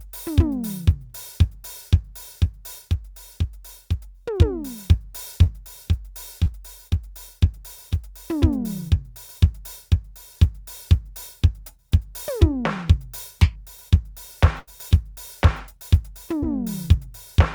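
At 5.43 s, 6.44 s and 16.41 s the music has short concealed packet loss: each time about 20 ms of audio failed to arrive, and the receiver covered the hole by extending the preceding sound before crossfading back. Each one is heard as a brief smear or wobble in the music. On a spectrogram each shows as a thin vertical strip where harmonics flatten into a smooth copy of the previous frame. The waveform shows a short run of overly regular cycles.

From 14.60 to 14.69 s a burst of packet loss removes about 80 ms in a row. The receiver kept repeating the last sound while fading it, so a held, fading continuation replaces the music, which then resumes with that stretch gone. The spectrogram shows a band of static, steadily darkening partials ending in an abrupt change. The waveform has a decaying envelope followed by a sudden jump back to full level.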